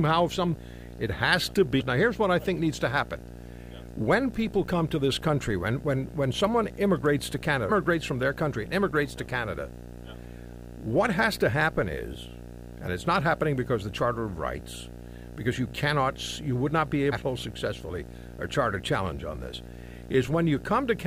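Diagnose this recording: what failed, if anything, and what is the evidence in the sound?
Two separate problems here. The first is in the analogue wiring: a steady video or display buzz sits under the speech for the whole clip, pulsing at a 60 Hz field rate with a layer of hash on top, roughly 15 dB below the speech. That's a screen or video cable coupling into the audio path, with the picture refresh leaking into the audio as a buzz at the display's field rate.

The second is damaged data in a compressed stream, at the codec and storage stage. There are three short glitches: 1.79 to 1.81 s right after "has to", 7.69 to 7.71 s between "when someone immigrates to" and "from their country and", and a single blip at 17.12 s just after "you would not be". Corrupt bytes in those frames threw the decoder off sync until it found the next frame header.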